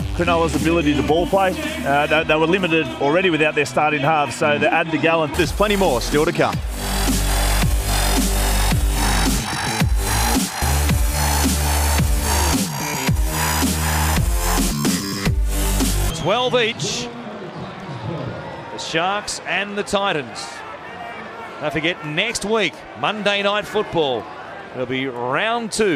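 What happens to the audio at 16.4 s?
Nothing goes wrong at 16.4 s; the audio passes through that moment intact, with no dropout, click or other fault.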